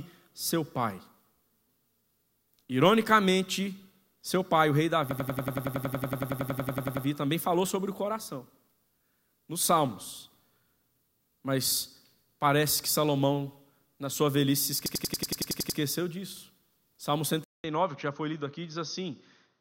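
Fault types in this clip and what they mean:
System hang loop: A rapid machine-gun stutter, one short slice of speech about 93 ms long repeating exactly at roughly 10.8 times a second, from 5.11 to 7.06 s (21 repeats) and again from 14.86 to 15.79 s (10 repeats). The computer or driver stalled while the sound hardware kept replaying the same stretch of its ring buffer, and the loop length fits a 4096-sample buffer.
Input switched to a poorer device: At 17.44 s the audio drops out for about 200 ms, then returns duller and boxier through to the end. Nothing is left above 6.4 kHz, the level sits about 5 dB lower, and a new background hiss appears around 50 dB under the speech. The likely cause is the system changing its input mid-recording to a narrower-band microphone or a headset's call profile.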